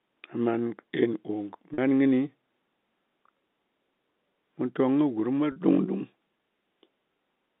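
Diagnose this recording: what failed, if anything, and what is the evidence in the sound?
Network stage: packet loss with pitch repetition, twice, at 1.74 s and at 5.52 s right after "kɨ gurm mwa". Each 40 ms gap, which fits two 20 ms packets, gets bridged by looping the last pitch period, so you hear a short held, buzzy note.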